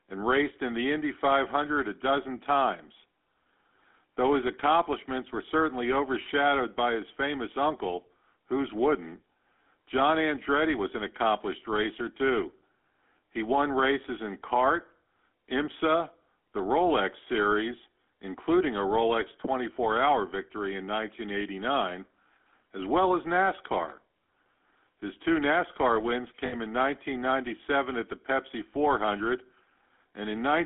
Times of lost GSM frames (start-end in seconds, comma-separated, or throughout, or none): 26.46-26.54